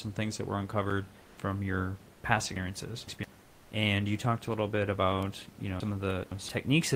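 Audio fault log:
1.21–1.37 s and 3.41–3.71 s, comfort noise in place of the background: in the pauses, the room noise, which sits about 26 dB below the speech, gives way for 160 ms and then 300 ms to a smooth, featureless hiss, about 1 dB and then about 3 dB quieter. This is likely Opus discontinuous transmission. The sender stops sending during silence, and the receiver fills the gap with synthetic noise that matches only the background's rough spectrum.
2.56–3.24 s and 5.80–6.49 s, chunks out of order: within each span, a block of about 171 ms plays three blocks later than it should, after the audio that belongs after it. No sound is lost, but the sequence is scrambled across roughly 0.68 s. There are three hard joins where the block is cut out and reinserted, so each span sounds like a brief jumbled stutter.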